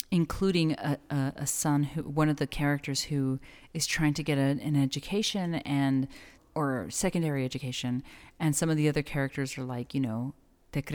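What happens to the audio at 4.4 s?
Nothing goes wrong at 4.4 s: the speech carries on cleanly through that moment, with no dropout, click, distortion or other fault to be heard.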